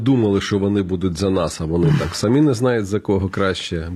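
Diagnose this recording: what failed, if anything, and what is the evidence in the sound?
The failure is at the playback stage: an adaptive stream starting at a low bitrate. From 0.0 to 2.5 s the speech sounds thin, with synthetic-sounding treble and stronger codec smearing, which points to HE-AAC around 20 kbit/s. Just before "знають за" it jumps cleanly, with no gap, to fuller AAC-LC-like quality reaching up to about 14.9 kHz.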